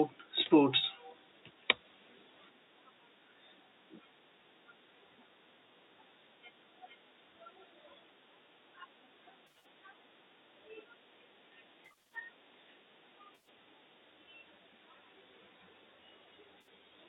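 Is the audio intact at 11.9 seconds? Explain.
No. AAC frame loss with concealment runs from 11.85 to 12.15 s. About 180 ms of frames drop out in short bursts, none much longer than 50 ms. The decoder patches each gap from the last good spectrum, so the sound turns smeared and noisy.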